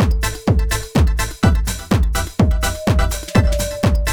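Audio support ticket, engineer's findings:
No audio faults found in the engineer's findings for this ticket.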